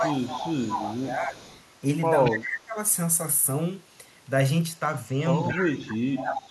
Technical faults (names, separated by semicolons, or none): speech suppressed in double talk; echo leak